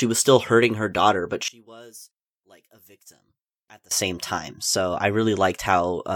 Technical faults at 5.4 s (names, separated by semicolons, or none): none